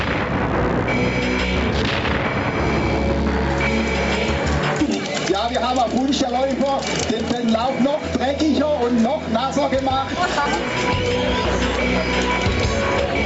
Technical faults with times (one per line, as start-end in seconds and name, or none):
0.00-13.25 gain pumping